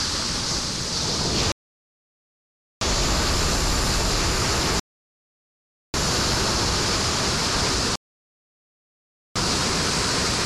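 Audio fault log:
1.52–2.81 s, 4.80–5.94 s, 7.96–9.36 s: rebuffering stall. Playback drained its downloaded data three times and halted until more arrived, adding about 1.29 s, 1.14 s and 1.40 s of silence. Each gap is a hard cut to silence, and the sound then picks up at the exact point where it stopped. No material is skipped or repeated, but the clip runs roughly 3.8 s longer than its content.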